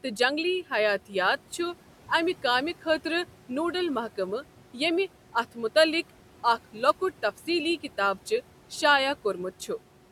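Speech recorded over steady room noise sits about 19 dB below the voice. Noise suppressor artifacts run through the whole clip. The suppressor cuts the background by about 12 dB in the gaps. The noise then swells back under each phrase.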